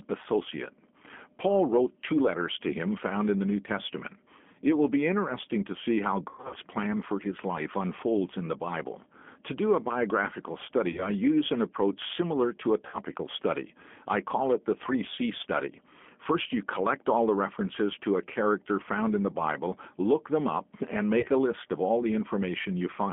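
Throughout, the speech sounds slightly rough and synthetic, boxed into a telephone band of about 200 Hz to 3.4 kHz: the plainly audible signature of the G.729 codec at 8 kbit/s.

Brief fading smears are VoIP packet loss concealed by the speech codec, where the decoder stretched its last pitch and filter over missing audio. They occur at 6.29 to 6.57 s (about 180 ms lost), 10.92 to 11.09 s after "do a biographical", 12.87 to 12.98 s after "approach similar to a", 15.15 to 15.19 s, and 21.20 to 21.27 s after "look them up and".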